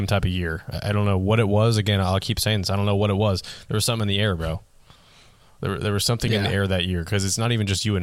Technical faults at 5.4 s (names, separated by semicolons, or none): none